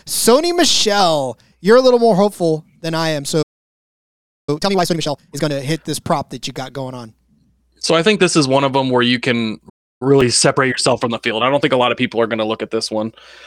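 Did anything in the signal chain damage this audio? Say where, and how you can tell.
Yes. Both faults sit at the playback stage.

The first is a playback stall. At 3.42 s the speech simply stops, and the output stays silent until 4.49 s, a gap of about 1.05 s. A second, shorter gap runs from 9.69 to 10.02 s, about 0.31 s, just after "them where you can". The speech picks up mid-flow each time. The likely cause is a player whose buffer ran dry or whose thread was blocked.

The second is time-compressed catch-up. It follows each stall. From 4.49 to 5.53 s, after "hopeful than I am" and before "hit this prop that", the speech runs at twice normal speed. The pitch stays put. From 10.02 to 13.02 s it runs about 1.1 times fast. The player is trimming its backlog by cutting small pieces out and cross-fading across the joins.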